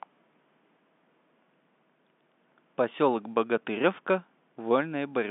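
No technical faults occur at any point in this speech, so there is nothing to place in time order.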